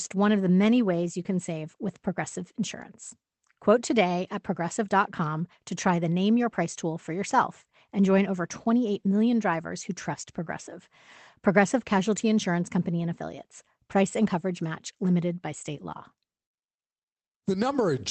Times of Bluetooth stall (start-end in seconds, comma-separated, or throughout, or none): none